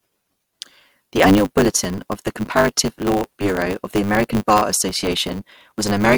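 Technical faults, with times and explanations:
Throughout: block size mismatch (truncated). The speech runs about 1.16 times faster than normal yet keeps roughly its natural pitch, under a steady 100 Hz buzz. The speed-up fits 512-sample blocks being written while a shorter span is read, so the tail of each block is discarded. A waveform shows abrupt joins every 10 ms, and a spectrogram shows vertical striations at that spacing with harmonics stacked on 100 Hz.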